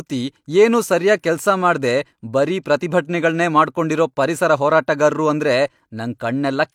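No technical faults are audible.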